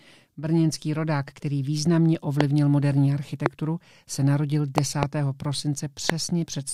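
Loud pops hit at 2.41–2.43 s after "rodák který významně", at 3.46–3.48 s before "se narodil", as a double pop from 4.78 to 5.05 s after "se narodil", and at 6.10–6.12 s, each towering roughly 20 dB over the speech. A likely cause is a voltage spike, such as a switch, plug or static discharge, entering the chain. Each pop shows as a sharp waveform spike and a thin full-height vertical stripe on a spectrogram, with speech continuing underneath.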